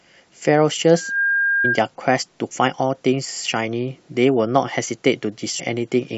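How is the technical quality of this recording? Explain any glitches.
The recording has two kinds of glitch, a feedback squeal and two brief decoding blips.

From 0.94 to 1.82 s a loudspeaker feedback squeal appears. The microphone is re-amplifying the speaker at 1.6 kHz, swelling over roughly a third of a second to about speech level.

At 1.64 to 1.66 s and 5.59 to 5.61 s there is damaged data in the compressed stream. The decoder loses frame sync and searches for the next frame header.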